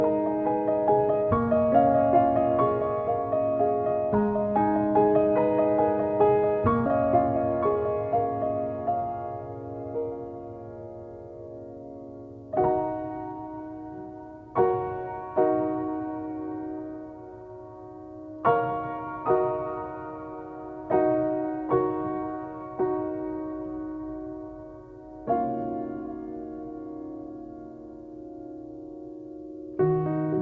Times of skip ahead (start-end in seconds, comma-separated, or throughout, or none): 6.86